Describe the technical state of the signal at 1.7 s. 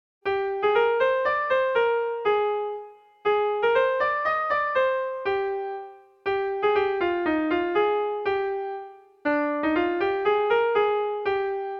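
At 1.7 s the signal is intact, with no technical fault to be heard at that point.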